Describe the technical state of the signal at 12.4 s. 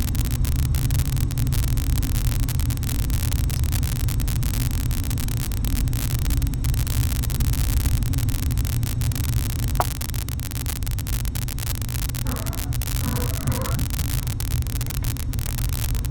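At 12.4 s an unreliable data bit, present throughout, flips randomly, injecting identical spikes of about -5 dBFS that produce a steady crackling fizz continuing through pauses.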